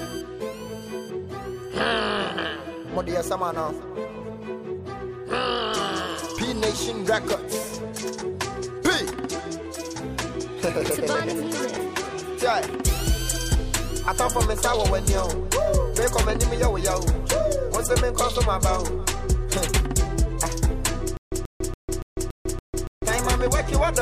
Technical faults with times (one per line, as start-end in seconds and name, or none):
21.17-23.05 stutter with silent gaps